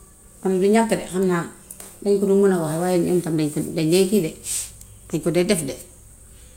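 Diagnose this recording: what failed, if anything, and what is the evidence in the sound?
Nothing in this speech recording points to a failure at any stage, from the analogue wiring through to playback.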